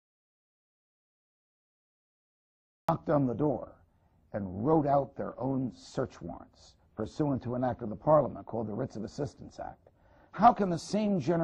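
The input path likely lost its source, through a disconnected device, a failed link or a mute, while the recorder kept writing silence, producing an audio dropout to silence. The clip opens already inside it: from 0 to 2.89 s there is complete silence, with no room tone or noise floor at all. The audio then starts abruptly mid-flow at 2.89 s, and whatever was happening before that point is missing from the recording.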